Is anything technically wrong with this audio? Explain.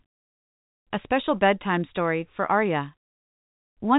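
No, nothing here is technically wrong.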